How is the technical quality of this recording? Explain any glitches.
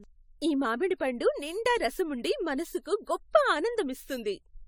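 The recording has audible generation loss across the whole speech clip, from start to finish. The sound is swirly and hollow, consonant attacks are smeared, and a watery grain sits under the voice. The spectrum still reaches up to 20 kHz. The likely cause is repeated lossy re-encoding, around ten passes, and the character points to AAC-LC at roughly 96 kbit/s. Each pass requantises on a shifted frame grid, so the errors and spectral holes stack up. A single low-bitrate encode would instead cut the top band and stay cleaner at this bandwidth.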